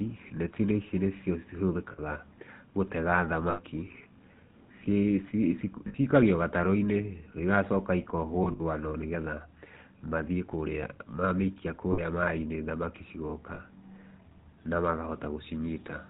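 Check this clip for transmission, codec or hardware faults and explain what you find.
Two faults are present: GSM full-rate coding throughout, and six bursts of lost GSM frames.

Throughout, the GSM full-rate codec, consistent with a 13 kbit/s encoding, band-limits the speech below 4 kHz. Its pulse-driven vocal-tract model, sampling only every third excitation value, gives plainly audible buzzy, gravelly roughness.

Lost GSM frames occur at 1.92 s (60 ms), 3.50 s (80 ms), 5.88 s (60 ms), 8.44–8.61 s (100 ms scattered, longest run around 70 ms), 11.92 s (60 ms) and 13.54 s (40 ms). Each lost frame reuses the last good frame's parameters, producing a rough, metallic ring.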